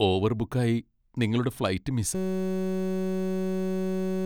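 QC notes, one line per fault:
2.15–4.25 s, system hang loop: the output stalls and one 5.33 ms fragment repeats exactly, several hundred times, to the end of the clip, which fits a 256-sample ring buffer. The repetition at 188 Hz sounds like a steady buzz, and about two seconds of speech are lost.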